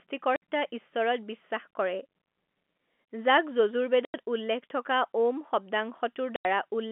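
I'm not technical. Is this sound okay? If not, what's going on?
No. There are three short dropouts where the speech suddenly cuts to dead silence: at 0.36 s for 60 ms, at 4.05 s for 90 ms, and at 6.36 s for 90 ms. This is packet loss filled with silence. Over a call, sound travels in small chunks. Some of these chunks never arrived, so the receiving end played nothing in their place. Each gap starts and stops abruptly, so you may hear a small click. The gap lengths suggest chunks of 30 ms each going missing. The muffled, phone-like quality comes from ordinary telephone coding, which drops everything above about 3.4 kHz.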